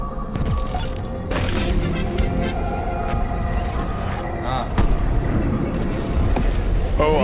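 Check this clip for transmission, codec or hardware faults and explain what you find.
Nothing stood out on listening to this clip.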